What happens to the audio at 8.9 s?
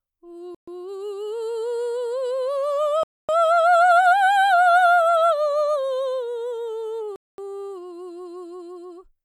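At 8.9 s the music plays through cleanly, with no dropout, click, distortion or other audible fault.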